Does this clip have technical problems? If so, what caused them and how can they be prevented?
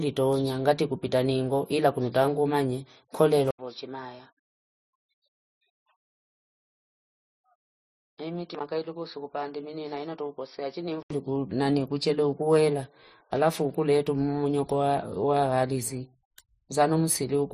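Yes. At 3.51 s, right after "ila kunuta angumanye kule", the speech drops out for 80 ms and returns roughly 10 dB quieter, dull and boxy, with nothing above 5.7 kHz and new background noise roughly 40 dB below the speech. It stays that way until 11.10 s, just before "nani kuchele ukuwela alafu". This points to the input likely being switched to a poorer device, a narrower-band microphone or a headset call profile with its own level and noise floor. Lock the recording input to a single fixed device and disable automatic device switching or headset call profiles before recording.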